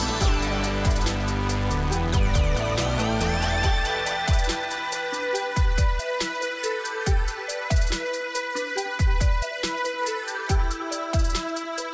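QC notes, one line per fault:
No faults are heard in this clip. The sound has passed through a WebRTC call path, with nothing above 8 kHz and coding noise consistent with G.722 at 64 kbps.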